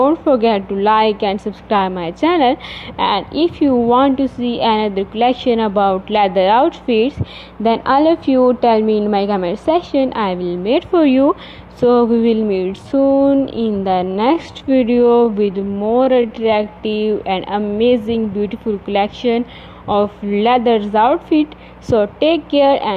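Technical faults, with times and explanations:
Throughout: mains hum, a steady 60 Hz tone with some low harmonics sitting roughly 25 dB below the sound, picked up from a ground loop or nearby transformer. On a spectrogram it is a thin unbroken horizontal line at 60 Hz, with fainter lines at multiples above it.
12.58–17.10 s: time-stretched section. The pace abruptly drops to about 0.68 times normal speed while pitch holds steady, so the audio drags. This is likely software stretching that repeats short segments to fill time.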